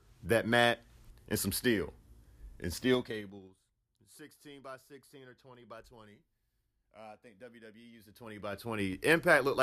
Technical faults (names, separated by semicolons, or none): zipper noise